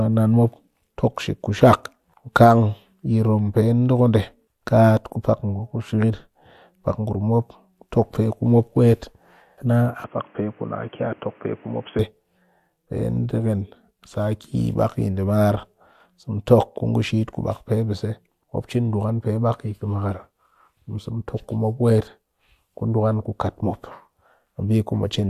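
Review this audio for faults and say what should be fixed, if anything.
From 10.04 to 11.99 s the speech turns dull and boxy, topping out around 3.3 kHz, about 5 dB quieter with a new noise floor roughly 30 dB down, likely an input switched to a poorer device. Lock the recording input to the intended microphone so the system can't hop devices mid-take.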